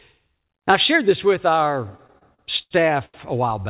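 From 1.97 to 3.15 s the speech drags with repeated stalls (stutter). Eight times the jitter buffer ran dry and the receiver stretched the last sound to fill the wait. The longest fill is 82 ms, 274 ms in all, nearly a quarter of that span, and nothing is lost. On a spectrogram these show as short smeared stretches where the harmonics hold flat, set against an empty band above 4 kHz that fits a G.711 call codec. The waveform shows copied, fading segments.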